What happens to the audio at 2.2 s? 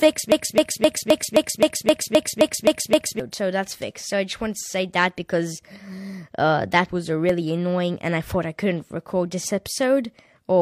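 At 2.2 s the speech is stuck in a broken-record loop. It runs from 0.32 s to 3.20 s. A fragment of about 262 ms repeats exactly, back to back, eleven times. The result is a rapid, mechanical stutter with no forward progress. The likely cause is a stalled player, encoder or stream that kept resending the last piece it held. Whatever speech belonged in that span is lost.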